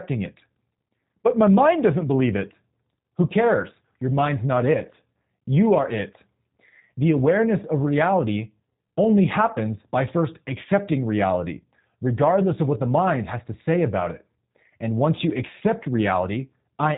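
From start to end the speech carries plainly audible G.729 codec damage, consistent with 8 kbit/s G.729A. Each 10 ms frame is rebuilt from a filter, pitch prediction and sparse pulses, sounding rough and synthetic. A spectrogram shows a hard ceiling at 3.8 kHz.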